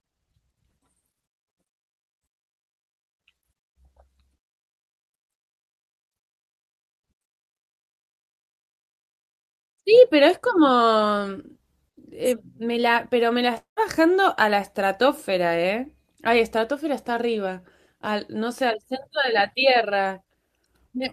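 A speech recording carried over a call path, with its spectrum topping out near 12 kHz as an Opus-coded stream would. From 13.57 to 13.79 s the sound smears into a fading buzzy continuation of the last moment for roughly 190 ms, then drops to near-silence for about 130 ms before speech resumes with about 200 ms of material gone. The likely cause is a long network dropout. On a waveform this shows as a decaying tail then a flat gap, and on a spectrogram as blurred, stretched harmonics fading into an empty band.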